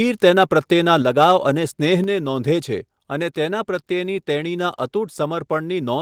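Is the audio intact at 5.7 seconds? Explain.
Yes, the speech at 5.7 seconds plays through cleanly, with no fault at that moment.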